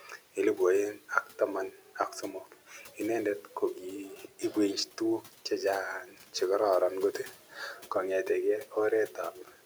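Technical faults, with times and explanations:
0.01–0.37, 1.71–2.99, 4.16–5.51, 6.05–6.34, 7.13–7.90 and 9.08–9.65 s: speech cut by the noise suppressor. The suppressor mistook quiet parts of the speech for noise and pulled them down with the background, by up to about 12 dB. Endings and soft consonants sound swallowed, briefly in each span.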